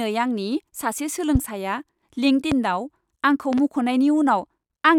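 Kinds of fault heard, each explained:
Loud pop: a sudden voltage pulse, likely from a switch or static, adds sharp thumps over the speech, one doubled; tall waveform spikes, thin broadband spectrogram lines.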